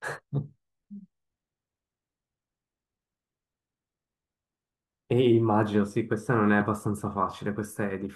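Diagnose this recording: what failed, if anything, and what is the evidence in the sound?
The failure sits at the driver or buffer stage: periodic USB or driver dropouts. From 0.88 s to about 4.97 s the speech carries about five small ticks spaced 1.02 s apart, each where a couple of milliseconds of audio are skipped outright, so the waveform jumps rather than falling silent. The rigid 1.02 s spacing, rather than the irregular timing of network packet loss, points to a background task stalling the bus or driver on a fixed schedule.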